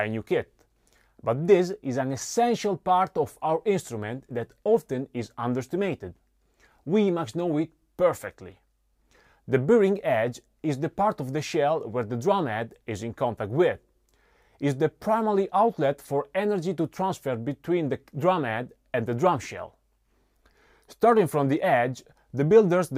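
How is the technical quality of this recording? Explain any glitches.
The recording's technical quality holds up with no glitches to explain.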